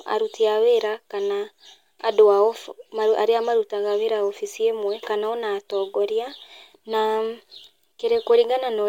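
Right after "wabici ĩmwe kana ona", at 5.71 s, there's a bit error spike. A single flipped bit threw a few samples off by a power of two before snapping back, so you get one sharp, broadband tick peaking around -26 dBFS that has nothing to do with the speech.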